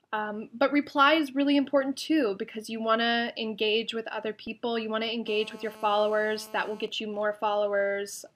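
A nearby 2G phone in a call, its bursts rectified by the audio circuit, lays a hard, raspy GSM phone buzz at about 217 Hz, about 21 dB below the signal, from 5.28 to 6.85 s. From 6.85 to 8.30 s, with the phone's user silent, only sparse groups of bursts get through, giving GSM signalling bursts: even ticks with a longer buzz twice a second, roughly 30 dB down.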